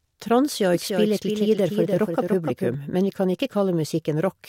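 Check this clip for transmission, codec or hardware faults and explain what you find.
One fault is present: a doubled audio track from 0.74 s to 2.74 s. The likely cause is the speech being picked up a second time through a slower path, or an edit leaving two copies misaligned. A full-band duplicate trails the original by about 300 ms at roughly 5 dB lower level. It carries no decay or room colouring, so it sounds like a flat, distinct echo of each syllable. It starts and stops abruptly at those boundaries.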